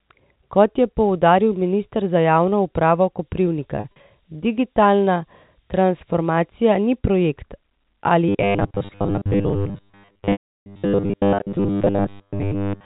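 From 3.19 s to 6.98 s the speech carries low bit depth with noise shaping. Only about 8 bits are in use, and the rounding error has been pushed up in frequency. The result is a thin, steady hiss around 20 dB under the speech that grows brighter toward the top of the band. On a spectrogram it shows as a noise floor tilting upward with frequency, densest just under the 4 kHz ceiling of the telephone band. That ceiling comes from the G.711 coding, which itself adds only faint noise.

Inside that stretch, between 3.76 s and 3.96 s, comes packet loss with pitch repetition. About 100 ms of audio is missing, scattered over 200 ms, and no single gap is longer than 40 ms. Each gap is filled by repeating the last pitch period. The short gaps sound like brief, slightly held buzzy notes. In the waveform they appear as runs of identical cycles, and on a spectrogram as flat harmonic stripes in place of moving ones.

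From 8.29 s to the end at 12.86 s the speech turns into a rigid, metallic buzz fixed at 100 Hz that still loosely follows the syllables. This is robotic sound from repeated short buffers, likely caused by a 10 ms block being replayed while most of the real audio is skipped. A spectrogram shows evenly spaced horizontal lines every 100 Hz, and the waveform repeats exactly every 10 ms.

Within that stretch, from 10.32 s to 10.66 s, a second packet loss with pitch repetition removes about 340 ms. The repeated pitch cycle fades out over roughly 50 ms into silence, and the sound resumes with a short cross-fade. This leaves a visible blank gap in both the waveform and the spectrogram.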